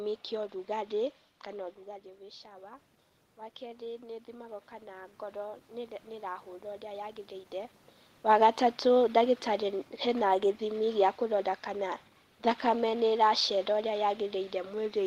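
At 1.5 s the talker moves back and the input drops by about 14 dB. Automatic gain rising follows. The gain control lifts by about 3 dB until 2.92 s, then about 7 dB from 3.58 to 7.81 s. Voice and room noise swell together.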